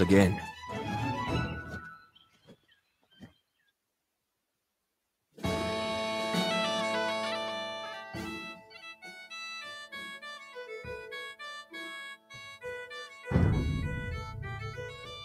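A noise suppressor built for speech stays active for the whole clip and treats sustained parts of the sound as noise, so its gain swings by roughly 10 dB. Held tones and decays thin out and pump while attacks come through largely intact.

Sound is cut by the noise suppressor in four places. From 1.96 to 5.36 s the deepest cut reaches about 17 dB across roughly three seconds, and the steady material audibly sinks. Shorter dips follow at 8.54 to 9.25 s (about 12 dB), 12.15 to 12.36 s (about 16 dB) and 13.07 to 13.26 s (about 7 dB).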